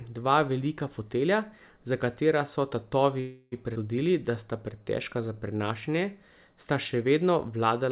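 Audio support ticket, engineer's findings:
Call audio freeze, 3.20–3.54 s, right after "fotelja za katera so": playback stalls and the last sound is stretched into a fading buzz for about 0.32 s. Likely packets held in transit, jitter buffer ran dry. Nothing lost on resume, only added delay.

Skip ahead, 3.74–3.77 s, just before "da sta": forward jump with only a tiny 15 ms fill. Roughly a tenth of a second of audio dropped, in transit or by the jitter buffer on overflow.

Jitter buffer slow-down, 4.78–5.59 s, following "da sta": audio drawn out to about 91% speed at unchanged pitch, 82 ms added in total. Receiver repeating single pitch periods to rebuild its reserve. Band-limited to 4 kHz throughout, consistent with a narrowband G.711 call path.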